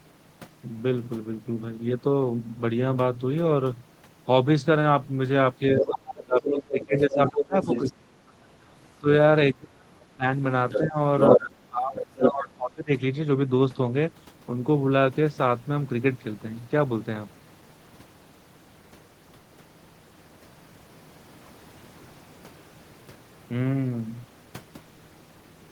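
From 5.74 to 10.24 s the talker's speech is suppressed in double talk, dipping by up to about 30 dB over roughly three seconds. Unlike a network dropout, the dips follow the other side's speech: the echo canceller likely turned both voices down when it could not separate them. The other side's voice leaks through at 5.81–5.99 s and 6.52–7.92 s at about 5 dB below the talker. This is a second voice, not a delayed copy of the talker, and it likely comes from loudspeaker echo that was not fully cancelled. Leakage returns at 10.7–11.37 s, about 5 dB louder than the talker. Suppression starts again at 10.81 s and runs to 12.91 s, dipping by up to about 25 dB over roughly 1.5 seconds, with further leakage at roughly equal level at 11.96–12.29 s.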